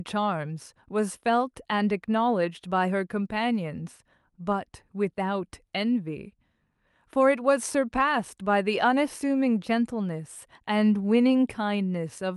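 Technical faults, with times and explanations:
No technical faults are present; the speech arrives through a call connection, its highest frequencies reaching about 12 kHz, which fits an Opus codec running at around 48 kbps.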